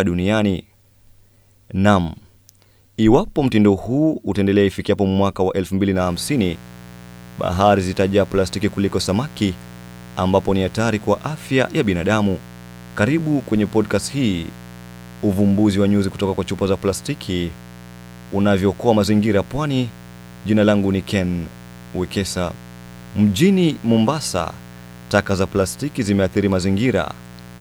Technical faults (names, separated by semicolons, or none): mains buzz